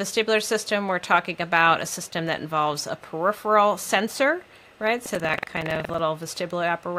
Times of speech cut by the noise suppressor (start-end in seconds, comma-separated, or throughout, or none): none